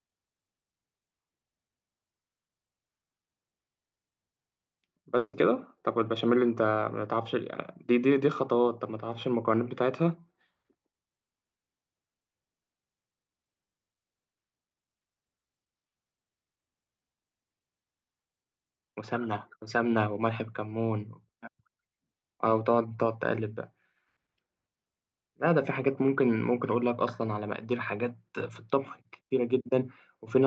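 A speech clip with one gap: from 5.17 to 5.35 s the sound trails off into a fading buzz for about 160 ms, then goes silent for roughly 50 ms before resuming with a chunk skipped. That's likely a long network dropout, with the receiver papering over lost packets. The call path around it sounds band-limited near 8 kHz, which fits an Opus call codec.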